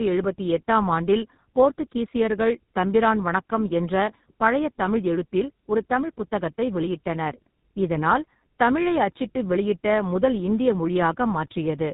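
Throughout, the speech shows tandem speech coding: it passed through two low-rate speech coders in a row, likely iLBC and then GSM full rate, the second re-encoding the first's damage. It sounds rough, muffled and warbly; a spectrogram shows nothing above 3.8 kHz and smeared, blotchy harmonics.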